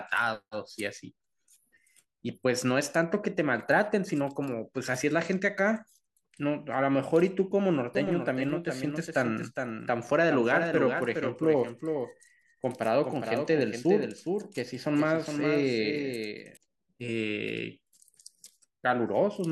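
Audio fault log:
7.95–16.57 s: doubled audio track. A second full-band copy of the speech runs about 400 ms behind, about 5 dB quieter, with no decay or room colour, and cuts in and out abruptly, likely from a slower second capture path.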